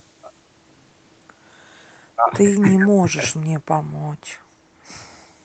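No technical faults can be heard in this speech, which has been through call microphone processing and a WebRTC call path whose codec leaves nothing above 8 kHz, a band limit that fits Opus at around 32 kbps.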